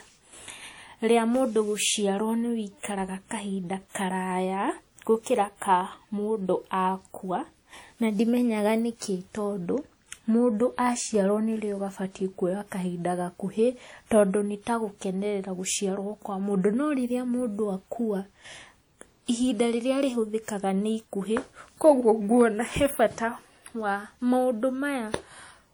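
It's a speech clip, and the whole thing has plainly audible WMA compression damage: a ringing, washy quality with hiss that swells and fades along with the speech. That smearing points to a transform codec, likely WMA at something like 48 kbps.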